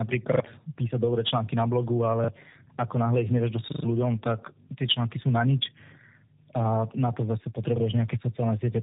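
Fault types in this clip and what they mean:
Tandem speech coding: throughout the clip the speech passed through two low-rate speech codecs in a row, with a G.711 link between them, so it was decoded and re-encoded at each border. The second coder, AMR-NB, had to model audio already roughened by the first, and the errors pile up. The speech sounds rough, muffled and warbly, with nothing above 3.8 kHz, which fits a G.729A-to-AMR-NB chain.
Repeated buffer: at 0.32–0.4 s, just before "písať dobré články na", at 2.24–2.28 s between "dobré články na blogu" and "ako náhle ich", at 3.72–3.84 s, and at 7.76–7.8 s after "a na to zase", fresh audio arrived late and the last 40 ms block was replayed one to three extra times. Each event is a short stutter with hard joins, and some following sound is lost, about 100 ms at most.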